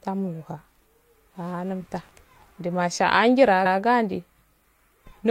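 Repeated frames at 3.65 to 3.78 s make this speech clip stutter: a 128 ms stretch of audio plays once and then immediately plays again. The length of the repeated block suggests a short run of compressed frames that was written or transmitted twice. The decoder had no way to tell they were duplicates, so it played them back in sequence. As a result, the clip is 128 ms longer than the original recording.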